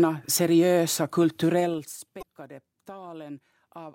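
From 1.58 to 1.98 s a fine ticking, like a zip being drawn, rides on the speech as it gets quieter. This is zipper noise: the level falls around 20 dB in unsmoothed 2 dB jumps, about 20 per second, each leaving a tiny click.

At 2.18 to 2.23 s a brief glitch cuts in. That is damaged data in a compressed stream: corrupted bytes made the decoder misread frames, lose sync and jump to the next valid frame header.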